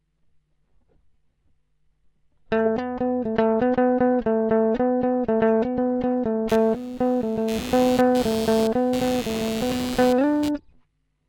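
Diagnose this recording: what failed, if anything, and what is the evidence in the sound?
Computer activity noise in the analogue wiring: from 6.49 to 10.49 s, a buzzing at roughly 100 pulses per second, some 15 dB below the sound, from computer load changes modulating the shared ground. Unlike steady mains hum, it starts and stops.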